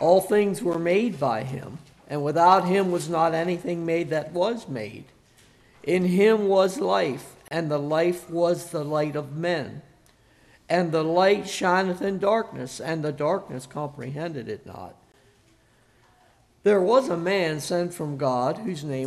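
At 0.73 s the sound cuts to silence for about 11 ms, at 7.48 to 7.51 s for about 31 ms, and at 15.12 s for about 19 ms. These are gaps at a join of encoded pieces: each piece was encoded separately and joined untrimmed, so the encoder's leading delay and last-frame padding remain as silence. The codec smears the edges. Unlike a dropout that loses material, the audio resumes exactly where it stopped.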